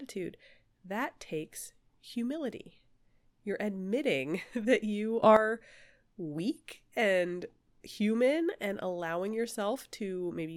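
At 5.23 s, right after "that you", a sudden gain jump of about 12 dB lifts speech and background noise together with no ramp until 5.37 s, likely an unsmoothed gain setting, unlike compressor pumping.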